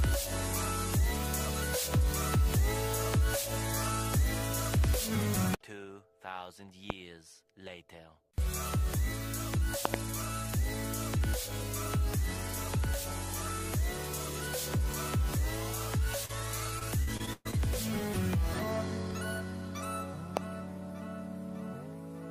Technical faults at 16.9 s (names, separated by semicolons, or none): repeated packet loss (robotic sound)